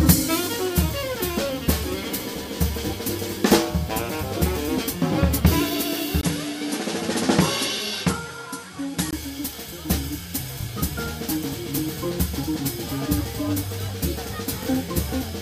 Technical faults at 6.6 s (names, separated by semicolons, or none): input switched to a poorer device; overlapping chunks